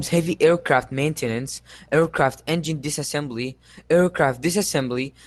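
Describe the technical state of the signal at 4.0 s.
At 4.0 s the speech is intact, carried through the WebRTC call path with no fault at that moment.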